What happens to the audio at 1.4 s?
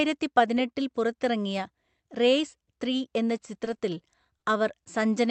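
Nothing goes wrong at 1.4 s: the speech passes through the call path intact, with no dropout, glitch or distortion at that moment.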